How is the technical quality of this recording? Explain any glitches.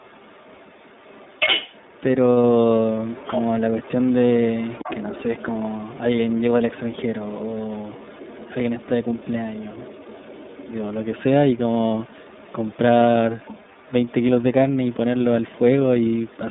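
The speech is clearly degraded by the line coding throughout, with a faint second voice running underneath most of the clip and one brief dropout.

The iLBC codec coding is present for the whole clip. The audio is confined to roughly 150 Hz to 3.7 kHz, so it sounds boxy, rough and a bit synthetic. That fits the 30 ms frame, 13.33 kbps mode. The call's microphone high-pass filter trims the deepest bass on top of that, which is normal.

The other side's voice leaking through is faint and shows up from 0 to 2.03 s, 2.89 to 11.22 s, 11.54 to 12.77 s, 13.36 to 14.95 s, 15.41 to 15.59 s and 16.01 to 16.39 s. The likely cause is a loudspeaker feeding into the mic past an incomplete echo canceller. It's low, about 15 dB under the main voice at the start and more like 25 to 30 dB under later.

There are lost iLBC frames from 11.88 to 11.91 s. That 30 ms gap fits a single dropped frame. The decoder fills it by repeating the last pitch cycle, so you hear a short buzzy held vowel before the voice snaps straight back.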